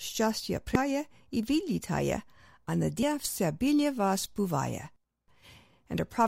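At 0.75 s and again at 3.02 s there's a quick blip, typical of damaged data in a compressed stream. Some of the data is wrong there, so the decoder misreads those frames and loses sync before finding the next frame header and carrying on with the speech.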